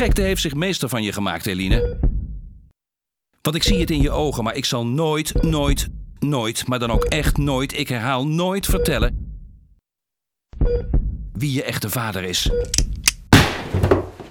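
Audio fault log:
No faults detected; nothing to log.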